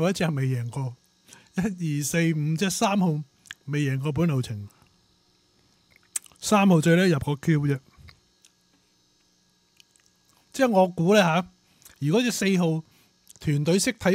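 No technical faults can be heard anywhere in this audio. There is nothing to report at any point in the clip.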